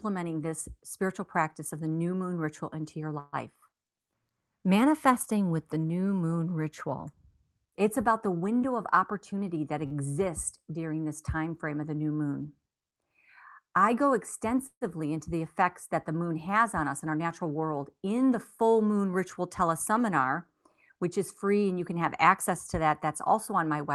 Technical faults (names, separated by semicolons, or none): call audio freeze; jitter buffer speed-up; short stall from a late packet